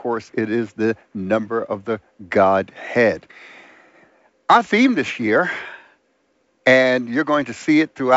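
The speech comes through G.722 wideband telephone coding at 64 kbit/s, with content reaching up to 7.7 kHz and nothing above it, at most a faint trace of the coder's own texture, and no technical fault to be heard.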